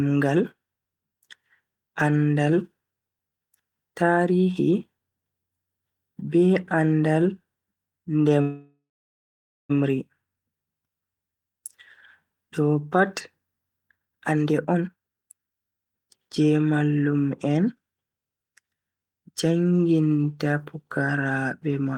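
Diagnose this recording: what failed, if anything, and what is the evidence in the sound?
Call audio freeze, 8.41 to 9.71 s: a network-stage stall, likely packets delayed until the jitter buffer ran dry. The receiver extends the last sound as a fading buzz, then about 0.87 s of silence, before the speech resumes where it stopped, inserting a 1.28 s gap with nothing lost.

Jitter buffer speed-up, 13.88 to 16.41 s, ending just before "mallum en": the buffer held excess audio and the receiver trimmed repeated pitch-period slices, roughly one and a half seconds in total. The speech runs at 151% speed with unchanged pitch, sounding hurried.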